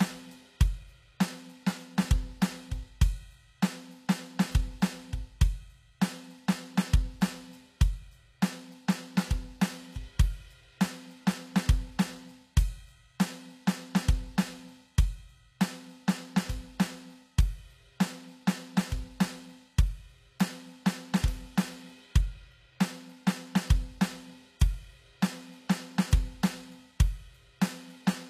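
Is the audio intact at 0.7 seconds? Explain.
No. At 0.7 s the music carries the damage that runs through the whole clip, most likely from HE-AAC compression at a low bitrate, around 24 kbps. Only the lower spectrum is truly coded, and the treble is rebuilt by copying lower bands upward. That upper range stays bright but sounds gritty and metallic, with harmonics that fail to line up. A spectrogram would show blocky, repeated-looking texture in the top bands and nothing above 14.9 kHz.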